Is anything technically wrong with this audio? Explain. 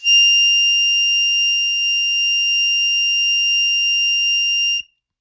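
No, nothing in this music clip points to a technical fault. No dropout, glitch or distortion can be heard at any point.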